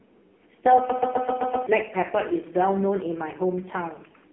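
Speech throughout carries heavy AMR narrowband mobile codec damage: nothing above 3.6 kHz, a 250 Hz to 3.4 kHz line band, and buzzy, synthetic vocal texture, unlike clean band-limiting, fitting the 5.15 kbps mode.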